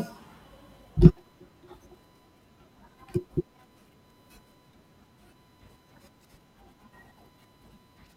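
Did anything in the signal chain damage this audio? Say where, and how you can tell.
Yes, USB whine at 1 kHz runs under the speech the whole way, roughly 35 dB down: the bus's 1 ms frame current is leaking into the analogue ground or power.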